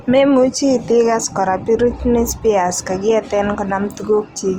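Speech runs through the whole clip with plainly audible Opus compression damage, most likely from encoding in Opus music (CELT) mode at a rate that fits about 24 kbps. The full audio bandwidth is kept, so the top end is not cut off, but the encoder is short of bits. It fills the under-coded bands with folded or noise-like content, which makes the voice sound grainy and rough, with a noisy texture over the harmonics.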